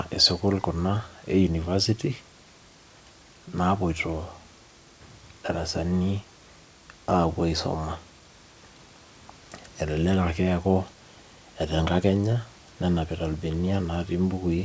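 No faults in the speech: the call path cuts off everything above 8 kHz, consistent with G.722 wideband coding, and the room noise sits about 33 dB below the speech.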